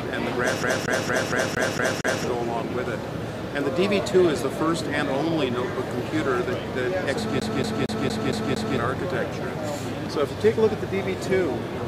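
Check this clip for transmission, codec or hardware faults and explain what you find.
A hardware fault: the CD stuck on one turn, twice. From 0.63 to 2.24 s and again from 7.40 to 8.78 s, the laser jumps back a track each revolution, so a 0.23 s slice repeats seven, then six times, with brief mutes between repeats, giving a rapid, even stutter.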